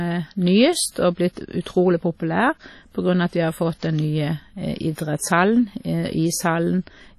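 Throughout the speech there is heavy damage from what is likely WMA compression. The sound rings and washes, with a hiss that rises and falls with the level of the talker, and nothing is present above 14.6 kHz. Quantisation noise from long transform blocks is smeared over tens of milliseconds, and the coarse quantisation zeroes weaker spectral lines. The depth of damage fits a low bitrate in the region of 32 kbps.

Pre-echo appears at 1.33 s, 1.62 s and 5.17 s, lasting about 40 ms, 41 ms and 33 ms respectively. In each case a sharp onset lands late in a transform block, so the noise budget set by the loud attack is spread across the quiet stretch ahead of it. The listener hears a brief hiss arriving just before each attack, and the attack itself sounds softened and smeared rather than crisp.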